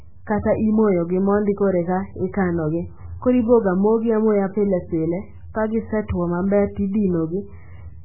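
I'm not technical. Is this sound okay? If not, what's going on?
No. The speech sounds muffled and watery from start to finish. Nothing comes through above about 3 kHz, so the crisp top of the sound is gone. S sounds lose their hiss. The tone has a swirly, underwater quality, and the starts of sounds blur. This is heavy damage, most likely from MP3 compression squeezed very hard. When a file is made that small, the encoder throws away the treble and the quiet detail to save space.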